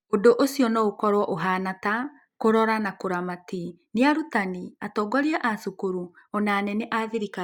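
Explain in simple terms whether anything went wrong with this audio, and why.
Nothing went wrong here; no faults can be heard.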